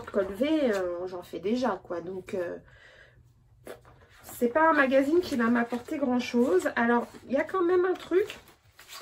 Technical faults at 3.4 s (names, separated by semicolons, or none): none